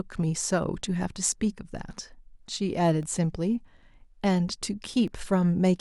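From 2.01 s to 5.08 s, the speech carries periodic USB or driver dropouts. Each one is a tiny gap of about a millisecond, filled with silence. They repeat every 1.02 s, about four in all. Something in the system seems to block the USB bus or audio driver on a fixed schedule, so a sliver of samples never arrives. Each gap is heard as a small, sharp tick. The ticks fall evenly in time and cut into the speech.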